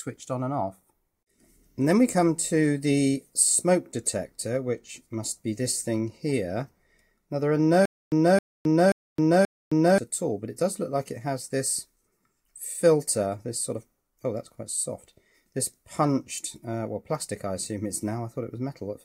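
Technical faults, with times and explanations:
7.85 to 9.98 s, stutter with silent gaps: playback likely stalled, and each time it retried it could only replay the last fragment still in its buffer before running dry again. The same 0.27 s burst comes back four times at a steady 0.53 s interval, each followed by about 0.27 s of dead digital silence, so the sound lurches in a regular on-off rhythm. The material that should have filled this stretch never arrives.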